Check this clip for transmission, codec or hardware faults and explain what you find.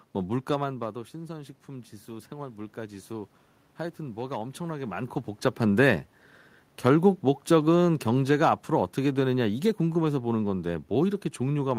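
The automatic gain control is the culprit here, twice: once pushing up, once pulling down.

Automatic gain rising, 1.13 to 3.37 s: the level at the mic dropped by about 13 dB, and the AGC responded by slowly adding about 4 dB of gain. You hear the voice and the room noise swell together over those two seconds.

Automatic gain falling, from 6.87 s to the end: the input was either too loud or carried too much background noise for the gain the AGC started with, so the AGC started easing its gain back. The speech gradually sinks, with the room noise sinking right along with it.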